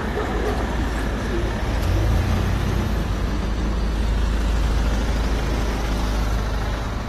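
From start to finish the sound is dull and smeared, with nothing above about 12.4 kHz and a fizzy, warbling texture on sustained passages that is plainly audible throughout. This is likely AAC compression, specifically AAC-LC pushed to a low bitrate, which fits something around 32 kbps. Starved of bits, the encoder dropped everything past that ceiling and coarsely quantised what remained, leaving thin gaps and noisy patches where detail should be.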